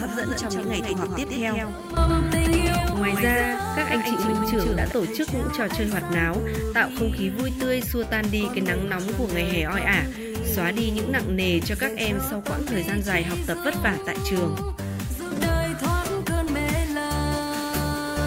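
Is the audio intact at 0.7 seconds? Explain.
No. A doubled audio track runs from the start to 4.92 s: a second, full-band copy trails about 150 ms behind at roughly 5 dB lower, likely from a slower capture path or misaligned edit. Unlike echo or reverb, it is one clean copy with no decay or room colour.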